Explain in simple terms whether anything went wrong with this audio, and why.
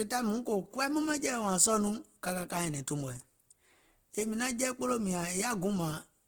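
Throughout the speech, the sound turns grainy, rough and noisy, likely from Opus compression squeezing it hard. Compared with MP3 damage, it swirls less.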